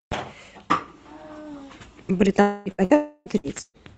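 Long network dropouts at 2.41 to 2.68 s and 2.96 to 3.29 s in this speech recording are likely: each time the last sound is stretched into a fading buzz or hiss for roughly a quarter to a third of a second, and then the speech returns with that stretch missing. Bursts of packet loss at 2.71 to 2.81 s, 2.84 to 2.93 s, 3.38 to 3.46 s and 3.61 to 3.77 s briefly hold and fade the last sound for about 60 to 120 ms each, the final one ending in a short silence, before the speech skips ahead. All of this sits on a call-codec path whose band-limited sound fits Opus at around 24 kbps.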